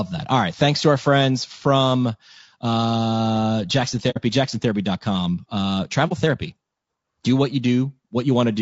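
Throughout, the speech sounds rough and grainy, with noise between harmonics and a thin, synthetic top band, likely low-delay AAC compression at a bitrate around 32 kbps.

At 4.10 to 4.18 s and again at 6.08 to 6.13 s, AAC frame loss with muting leaves a soft-edged hole and then a brief dip, fitting roughly two frames and one frame zeroed.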